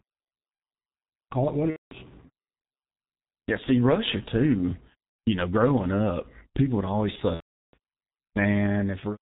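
The whole clip runs through the G.723.1 codec, heavily damaged: everything above 4 kHz is gone, consonants smear, and the speech turns hoarse rather than simply dull. A plain low-pass filter would not add that, and the coarse texture fits a rate near 6 kbit/s.

VoIP packet loss concealed by the speech codec hits at 1.70–1.94 s, 5.09–5.18 s and 7.34–7.76 s. The decoder stretches its last sound into a fading buzzy tone or coloured noise and then mutes it, and the speech stays weak briefly after each gap.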